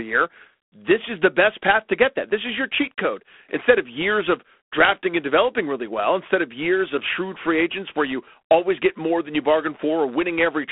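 Throughout the speech, G.726 ADPCM coding is plainly audible: a harsh, rasping hiss rides on the speech and swells with its level, which points to the coarse 24 kbit/s mode. The band runs from about 250 Hz to 3.5 kHz, with nothing above 3.8 kHz.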